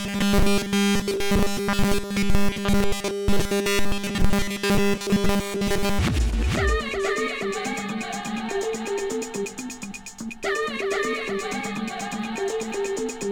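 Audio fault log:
throughout: doubled audio track. The same audio is mixed in a second time about half a second late and at roughly equal level, likely because a slower path captured it again or an edit holds two copies out of step. The full-band echo has no decay or room colour, so everything sounds stated twice.
0.01 to 5.99 s: robotic sound from repeated short buffers. New audio likely arrived too seldom, so the playback kept looping its last short segment while nearly all the real audio was skipped. The 200 Hz repeat rate, which fits a 5 ms buffer, imposes a fixed pitch and turns the sound into a rigid metallic buzz that only loosely follows the original.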